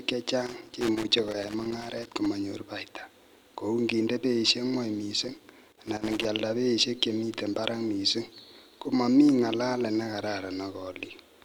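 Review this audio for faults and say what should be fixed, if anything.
Loose connector crackle runs from 0.46 to 2.26 s and again from 5.22 to 6.25 s, between "beisiek gwony" and "beisiek che". A worn contact chops the speech in irregular scratchy bursts, unlike evenly spaced digital clicks. Reseat or replace the connector and cable, and clean the contacts.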